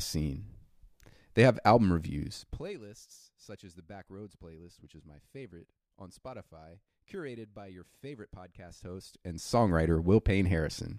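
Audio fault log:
2.32–2.74 s, zipper noise: right after "have album" the level drops by roughly 20 dB in 1 dB steps, around fifty a second, with no smoothing between them. Each step is a tiny click, so you hear a fast buzzy zip riding on the speech as it fades.
8.68–9.75 s, zipper noise: after "curated by your favorite" the level climbs back by about 20 dB, again in 1 dB jumps, but slower, around twenty a second, so it comes across as a coarser ticking.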